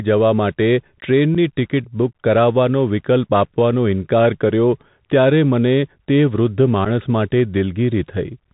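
Throughout the recording the speech has passed through a Bluetooth CVSD headset codec, the narrowband headset link that encodes the signal as a single up-or-down bit per sample with an adaptive step size, which fits a 64 kbps stream. Everything above 4 kHz is removed, so the speech sounds boxed-in and telephone-like. Loud, bright sounds outrun the adapting step and distort, s sounds come out scratchy, and a grainy hiss sits beneath the speech.

At 1.35 s, and again from 6.85 to 6.87 s, there is unconcealed Bluetooth headset packet loss. Each time, a single voice packet of about 7.5 ms failed to arrive between headset and phone, and nothing repaired the gap. Silence or an idle pattern filled the space instead. Each drop sounds like a brief hole cut into the speech, with hard edges that can click, and the level may sag for a moment as the codec recovers.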